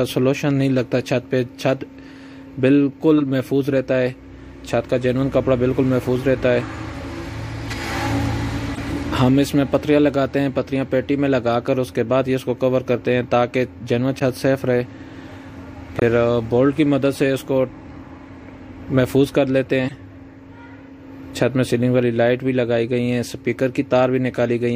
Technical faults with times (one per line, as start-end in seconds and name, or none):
3.18-3.22 corrupt frame decoded
7.66-7.74 corrupt frame decoded
8.74-8.79 corrupt frame decoded
14.19-14.22 corrupt frame decoded
15.96-16.02 corrupt frame decoded
19.88-19.95 corrupt frame decoded